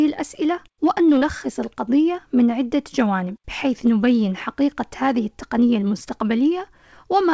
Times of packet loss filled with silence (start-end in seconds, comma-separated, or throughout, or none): none